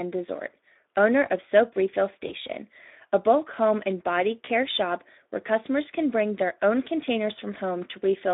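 Speech squeezed through a Speex codec the whole way, band-limited to roughly 250 Hz to 3.7 kHz, with plainly audible hoarse, noisy CELP coding damage, which points to around 11 kbps. There are also two spots of VoIP packet loss concealed by the speech codec, at 2.27 to 2.32 s and 4.45 to 4.50 s. Each sounds like one missing 20 ms chunk that the decoder patched by stretching its last pitch and filter into a brief fading smear, and the sound stays weak or distorted until it recovers.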